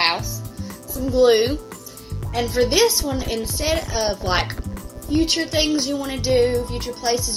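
From start to finish a steady, raspy mains buzz sits under the sound, roughly 30 dB below it. Sharp switching spikes, entering twice per 60 Hz cycle through a dimmer, rectifier or missing shield, put harmonics of 60 Hz up into the kilohertz range.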